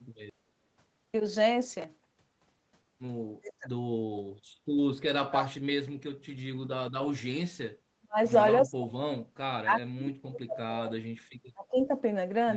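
Speech in this clip repeatedly sinks or breaks up in chunks: the voice drops by roughly 30 to 40 dB at 3.4 to 3.72 s, 5.08 to 5.89 s, 7.99 to 8.19 s and 8.65 to 9.01 s, then fades and cuts out for most of the long stretch from 9.4 to 11.93 s. This is speech suppressed in double talk, likely from an echo canceller that heard both ends talking at once, could not tell this talker from its own loudspeaker echo, and turned everything down. Inside the second dip, at 5.43 to 5.47 s, a faint scrap of the voice comes back 348 ms late, around 30 dB below the speech. That brief return is an echo leak, likely where the far end's loudspeaker sound reached its microphone and its canceller let a residue through, sending a delayed copy of the voice back down the line.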